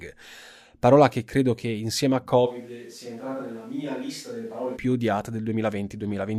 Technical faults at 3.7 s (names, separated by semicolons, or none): switch to a distant microphone